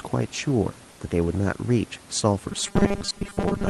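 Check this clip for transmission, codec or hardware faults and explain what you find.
One transmission fault is audible, from 2.52 s to the end at 3.70 s: robotic sound from repeated short buffers. New audio was likely arriving too seldom, so playback kept repeating a roughly 5 ms slice while most of the real signal was skipped. Those repeats impose a steady 200 Hz buzz, turning the speech into a rigid, metallic drone that only loosely tracks what is being said.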